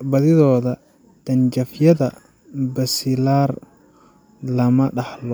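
No technical faults are audible.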